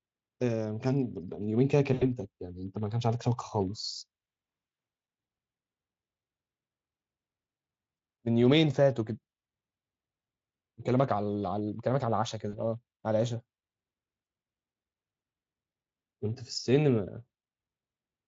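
Around 1.93 to 2.04 s there's VoIP packet loss concealed by the speech codec: the decoder fills the gap by stretching its last pitch and filter into a fading buzzy tone or coloured noise, roughly 80 ms of it. Shorter dropouts follow at 7.97 s, 12.49 to 12.58 s, and 14.25 s.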